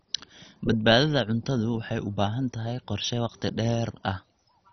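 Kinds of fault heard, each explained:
MP2 compression: throughout, the speech has nothing above 6.1 kHz and a heavy gurgling, granular texture, likely from MPEG Layer II coding at a very low rate, near 32 kbps, that starves its 32 sub-bands, silencing the upper ones and coarsely quantising the rest.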